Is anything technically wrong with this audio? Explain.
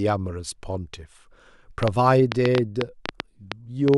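Yes. From 1.83 s to 3.95 s there is a train of clicks: about 5.7 per second, irregularly spaced, some fifteen in all, peaking around 20 dB above the speech. The likely cause is interference or a faltering interface injecting repeated pulses, heard as popping over the speech.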